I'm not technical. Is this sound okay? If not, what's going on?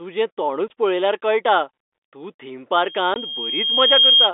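No. The sound has two problems.

Packet loss filled with silence: at 0.68 to 0.70 s, just before "पळयल्यार कळटा तूं थीम", and again at 3.14 to 3.16 s, the sound drops out completely for a fiftieth of a second. Each gap starts and stops abruptly, which suggests lost data rather than a fade or a dip in loudness.

Loudspeaker feedback squeal: after "पळयल्यार कळटा तूं थीम", from 2.78 s to 4.31 s, a single high tone around 3.2 kHz swells over about one and a half seconds. A microphone is picking up its own loudspeaker. Unlike a steady electrical whine, it keeps getting louder.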